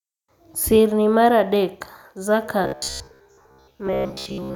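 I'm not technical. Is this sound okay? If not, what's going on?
No. From 2.64 s to the end, the speech becomes robotic sound from repeated short buffers: a rigid 67 Hz buzz, likely from audio arriving too slowly and gaps being filled with repeats.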